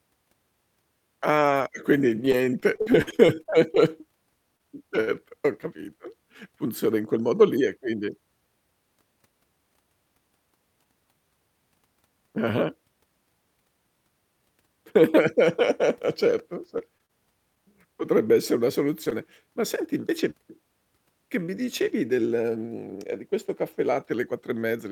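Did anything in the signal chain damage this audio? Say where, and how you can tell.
Yes, the damage is on the network side of a call, at the receiver's packet handling.

From 2.25 to 4.61 s, right after "e quindi", the speech turns choppy, with sixteen small holes, the longest 48 ms, patched over about 13% of that stretch. A shorter burst from 16.78 to 17.58 s has four holes, the longest 31 ms, about 10% concealed. This is repeated packet loss (robotic sound): packets kept failing to arrive, and each gap was filled by stretching the previous sound before the next loss hit.

Just after "essere una", from 19.04 to 19.08 s, there is a brief smear where a sliver of sound is missing. This is short concealed packet loss: about 20 ms of audio never reached the decoder in time, so the receiver extended the preceding sound across the hole and blended back into the real signal. The join is audible as a short wobble rather than a clean dropout.

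From 19.46 to 22.09 s the delivery runs slightly faster while pitch stays unchanged, at 102% of normal speed. This is a jitter buffer speed-up. The buffer held more audio than its target. The receiver trimmed pitch-period-sized pieces repeatedly, removing roughly a twentieth of a second in total to bring the delay back down.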